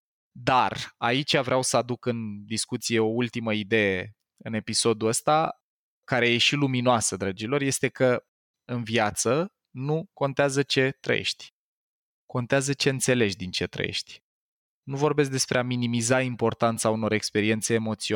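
No technical faults are audible anywhere in this recording.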